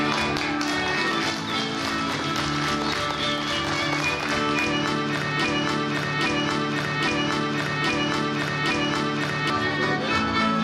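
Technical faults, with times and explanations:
5.45 to 9.5 s, broken-record loop: the same 0.82 s chunk repeats five times back to back, stuck in place. Likely the player or stream stalled and kept resending its last fragment, so the audio meant for that stretch is lost.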